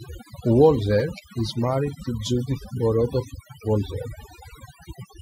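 A speech recording that's been hit with overdone noise removal from start to finish. The denoiser was set so aggressively that any frequency band sitting near its noise estimate gets pulled way down or switched off. The quieter parts of the voice get dragged out along with the noise. So the gaps drop away and break up into twinkly little specks.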